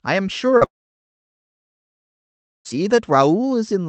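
At 0.57 s, about 40 ms of the speech goes missing, and the gap is bridged by short concealed packet loss. The receiver extends the last sound and blends it back into the real audio by 0.63 s. The result is a brief smear or wobble. What sets it apart from a dropout is its length: a few hundredths of a second, with no silence and with speech resuming right away.

Only 20 ms later, at 0.65 s, the sound is held and stretched into a fading buzz. After that comes near-silence for almost 2 s, until the speech returns at 2.67 s with that stretch simply gone. The length and the dead air after the fade distinguish this from the earlier blip. It is most likely a long network dropout, with about 2 s of audio never arriving. The call path's Opus coding limits the sound to 8 kHz.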